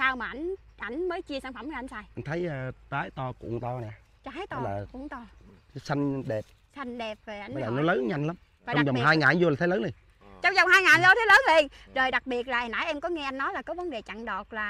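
No technical faults can be heard anywhere in the audio. Nothing breaks up, drops out or shifts at any point.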